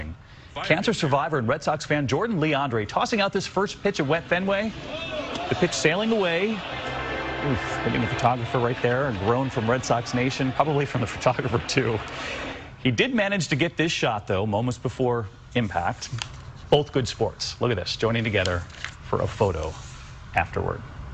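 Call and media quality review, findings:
Hard clipping at 8.26 s, 10.60 s, 16.73–16.75 s and 20.38 s. Brief crackle on peaks, worst at 16.73 s. Overdrive about 2 dB, 1 dB, 4 dB and 2 dB. Probable component: gain stage feeding the converter or a fixed-point format with no headroom. Peaks exceed the ceiling and are cut flat, and the flat tops throw harmonics high into the spectrum.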